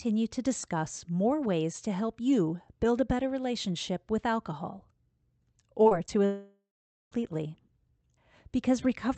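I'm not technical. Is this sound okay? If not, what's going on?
No. Around 5.83, 5.89 and 6.07 s there's short concealed packet loss: tiny bits of the call went missing, and the gaps were patched over, so the speech briefly smears or wobbles. Then from 6.26 to 7.14 s the speech cuts out, most likely a long network dropout. The last sound trails off, about half a second of silence follows, and the speech resumes with that stretch gone.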